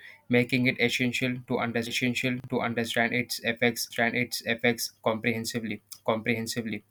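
A 40 ms chunk arrived one chunk late at 2.4 to 2.48 s, so chunks out of order garble that moment.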